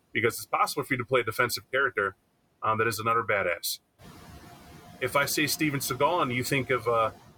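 Noise suppressor artifacts run through the whole speech clip. The suppressor estimates which frequency bands hold steady background noise and pulls them down frame by frame, by about 13 dB. In the pauses the room noise drops away, and whenever speech starts it comes back up beneath the voice, so the background audibly pumps with each phrase. This is most exposed after about 4 s, when the room noise itself rises by roughly 10 dB, sitting about 13 dB below the speech.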